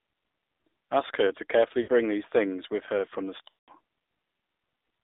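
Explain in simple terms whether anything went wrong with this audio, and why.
The speech sounds thin, buzzy and boxed-in, with nothing above about 3.7 kHz, the typical sound of the AMR narrowband mobile codec squeezing speech onto a low-rate phone link.

There are also brief dropouts where the sound smears and fades. At 1.82 to 1.90 s, just after "her to carefully", the sound briefly smears and fades. At 3.48 to 3.70 s, after "with her from the", the sound stretches and dies away. Both are lost AMR speech frames: pieces of the signal were corrupted in transmission, so the phone guessed and faded the missing sound.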